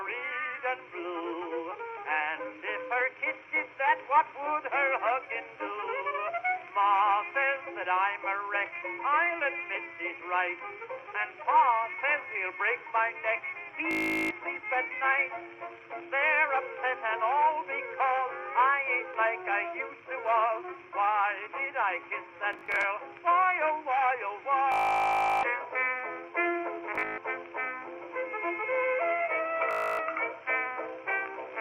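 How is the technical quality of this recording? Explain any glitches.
The recording has five bouts of Bluetooth stutter, at 13.91, 22.53, 24.72, 26.95 and 29.71 seconds. Each time, the audio stream arrived late or broke up, so the receiver looped a short slice of its last buffer. That makes a rapid buzzing, machine-gun repetition. The longest gap is about 0.71 seconds, at 24.72 seconds. The dropouts at 22.53 and 26.95 seconds are broken up into more than one burst. After each gap the sound jumps ahead, as if it had kept playing during the stutter.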